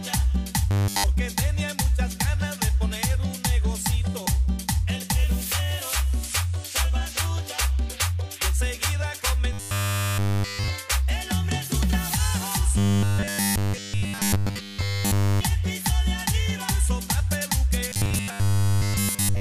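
At 0.71 to 1.04 s, 9.53 to 10.68 s, 12.78 to 15.41 s and 17.89 s to the end, you get robotic sound from repeated short buffers: a rigid metallic buzz pinned at 100 Hz. That's likely one 10 ms chunk looping over and over while the fresh audio gets skipped.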